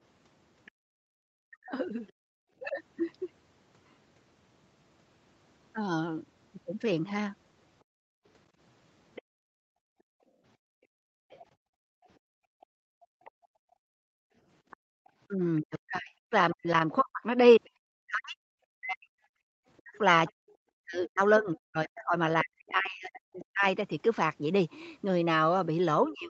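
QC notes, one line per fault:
0.65–2.12 s and 9.15–23.45 s, other side's voice leaking through: a faint second voice sits under the talker, at about -30 dB in the first stretch and about -25 dB in the second. This is likely loudspeaker echo that the echo canceller left in the microphone signal.
0.71–2.41 s, 9.22–15.08 s and 19.37 s, background gated by the echo canceller: room tone drops by about 31 to 33 dB while the far end plays. This totals roughly 0.7 s, then about 5 s, then a brief 0.2 s dip. The suppressor is clamping the microphone and releasing it when the echo ends.
1.39–2.75 s, 8.04–8.18 s and 15.36 s to the end, speech suppressed in double talk: the talker's own voice dips by around 40 dB or breaks into pieces. This is likely because both sides speak at once and the canceller attenuates everything it cannot separate from the echo.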